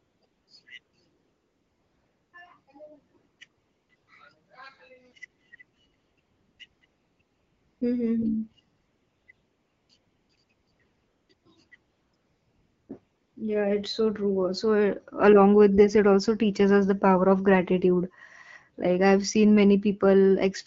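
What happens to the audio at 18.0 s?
Nothing goes wrong at 18.0 s: the audio there is intact, carried through the AMR wideband (HD Voice) codec at 12.65 kbit/s, whose coding leaves only light marks on it.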